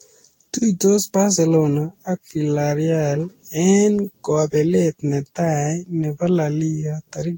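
Repeated lossy re-encoding, likely about ten passes of Vorbis near 60 kbit/s, causes generation loss throughout: swirly, hollow speech, blurred attacks, nothing above 16.6 kHz.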